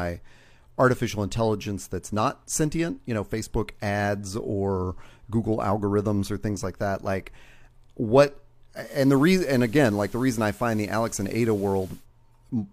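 A speech clip in which, from 8.8 s to 12.07 s, the sound shows digital radio blending to analogue: the receiver cross-fades over about 135 ms to the station's FM broadcast, so steady hiss rises to roughly 25 dB under the signal, with no change in level. That quick blend, the added hiss and the return at 12.07 s separate it from a gradual noise floor rise or a lowpass filter.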